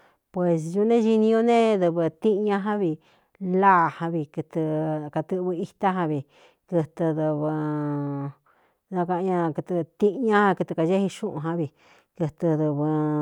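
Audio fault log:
No audible faults found.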